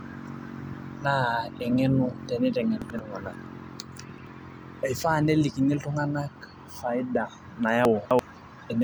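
Speech with three brief jumbled moments at 2.82–2.99 s, 4.10–4.27 s and 7.85–8.19 s: chunks out of order, roughly 85 ms blocks played one or three places late.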